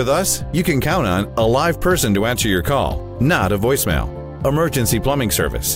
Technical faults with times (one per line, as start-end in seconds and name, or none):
none